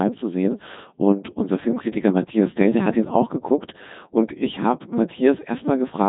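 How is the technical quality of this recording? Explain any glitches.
Pretty rough, honestly: the whole recording has been through a Codec 2 vocoder, and it's heavily damaged from start to finish. The vocoder doesn't keep the waveform. It sends only pitch, voicing, energy and a coarse spectral envelope, then rebuilds the speech from sine waves. That's why everything sounds robotic and buzzy, with a metallic, synthetic edge. The very thin detail points to a rate around 2.4 kbit/s, and there's nothing above 3.8 kHz, so it's dull and band-limited too.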